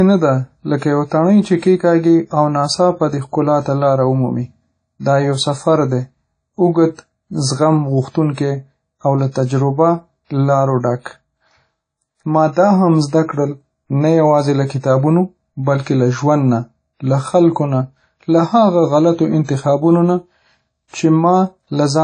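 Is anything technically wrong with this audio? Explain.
Yes. The whole recording was likely squeezed through WMA compression at a low bitrate, around 32 kbps judging by the damage. The encoder discards everything above 9.9 kHz and zeroes weak detail, leaving plainly audible washy, ringing speech with hiss that swells and fades with the voice.

Pre-echo occurs at 8.35 to 8.37 s and again at 20.88 to 20.94 s. There, sharp attacks land late in a transform block, so noise meant for the loud onset spills backward 29 ms and 56 ms respectively, heard as a brief hiss before each softened attack.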